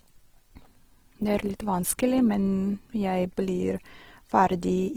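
Likely Opus compression in CELT mode, at a rate near 16 kbps, rebuilds starved bands only roughly, so the speech sounds rough and grainy throughout.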